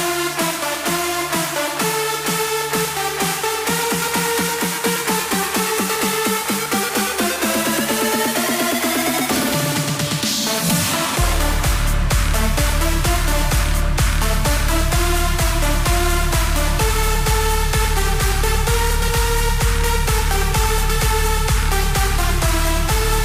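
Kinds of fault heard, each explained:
There are no kinds of fault heard in this clip.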